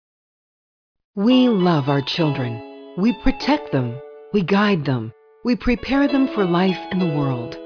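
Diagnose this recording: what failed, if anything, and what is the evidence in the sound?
Nothing failed here that I can hear: no stage in the chain, from the wiring and converter through to playback, leaves any audible trace of trouble anywhere in the recording.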